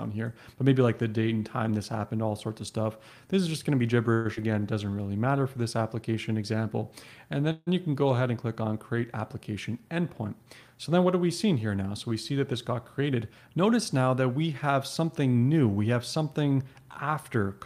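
Twice the incoming packets were most likely held up long enough to drain the jitter buffer, producing a call audio freeze: at 4.13–4.27 s the last sound is stretched into a fading buzz or hiss for 114 ms, and at 7.52–7.69 s a 150 ms fill ends in about 20 ms of silence. Each time the audio resumes where it stopped, losing nothing but gaining delay. Just after, at 4.35–4.39 s, 60 ms of audio never reached the decoder in time. That short concealed packet loss is heard as an 18 ms smear bridging the hole, and the delay falls by roughly 40 ms. The buffer then rebuilt its reserve with a jitter buffer slow-down at 4.85–5.08 s, repeating pitch periods to add 50 ms, so the sound plays at 82% speed with the same pitch and a drawn-out quality. Later, excess buffered audio was trimmed by a jitter buffer speed-up from 12.36 to 14.02 s. Roughly 100 ms is cut out in small pieces, making the sound run about 7% fast at unchanged pitch and feel hurried.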